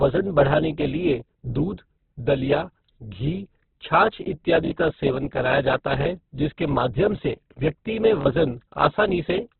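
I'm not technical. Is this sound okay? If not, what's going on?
No. The speech is dull and muffled throughout, as if heard through a cheap phone line: nothing above about 4.3 kHz survives, so the crisp top end of consonants is gone. What remains sounds rough and grainy. The likely cause is heavy Opus compression in its music (CELT) mode, squeezed to a narrowband setting. The encoder keeps the overall loudness of each frequency region but fills the detail with noise, so tones turn gritty.

There are also three short stutters caused by a repeated buffer, at 4.65 to 4.72 s, 6.02 to 6.06 s and 8.21 to 8.26 s. Each time, fresh audio arrived too late, so the player replayed its last small chunk, three extra times at the first spot and twice at the others. Each chunk lasts about 21 ms, which fits a 1024-sample buffer. The result is a brief stutter, with roughly 70 ms of speech lost at the first spot and about 40 ms at each of the others.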